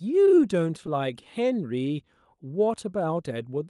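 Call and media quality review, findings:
Clock drift between sender and receiver: faint, uneven timing hiccups through the whole clip, speech pace slightly unsteady. Sender clock runs about 2% slow against the receiver, so the jitter buffer keeps draining and the receiver must stretch playback to avoid running dry.

Repeated timing corrections, 0.39 to 3.35 s: small repeated slivers and a slight drag in tempo, playback at 98% speed. Jitter buffer keeps inserting short repeated pieces, all in the lengthening direction and unevenly spaced, adding some 70 ms over the stretch. Heard over the Opus call path's 12 kHz bandwidth.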